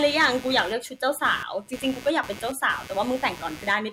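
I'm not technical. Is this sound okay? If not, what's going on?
No. The recording picked up computer activity noise: when the computer's processor, graphics card or mouse changes how hard it is working, that electrical effort leaks into the audio wiring through a shared connection. In this clip it is there for the whole recording as a buzzy, scratchy pulsing around 150 times a second, sitting well below the speech. It follows the computer's activity, not the talking.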